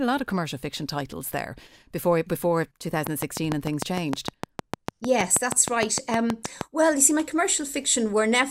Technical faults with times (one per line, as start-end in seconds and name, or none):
3.07-6.62 train of clicks